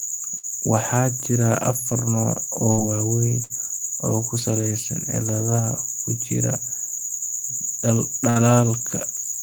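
At 0.37, 2.71, 3.43 and 8.30 s, a burst of packet loss cuts the speech. Each time, the receiver stretches the last sound for about 60 ms as a fading buzz or hiss. Then the speech jumps ahead, with about 60 ms gone.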